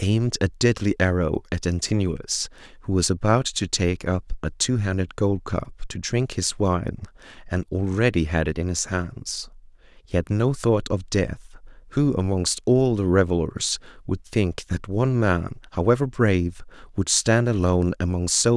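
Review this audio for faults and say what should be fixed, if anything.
Nothing here needs fixing; I listened through and didn't hear any technical problems in this recording.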